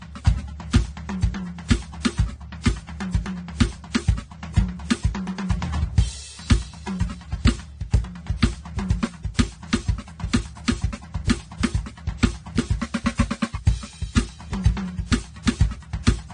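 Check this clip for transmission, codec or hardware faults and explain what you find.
One fault runs through the music. Transcoding between lossy codecs, throughout: the clip was likely encoded several times in a row, which fits low-rate AAC passed through WMA and AAC again. Each pass re-codes earlier smearing and adds its own, so layered swirly artefacts pile up, and nothing is left above 9.7 kHz.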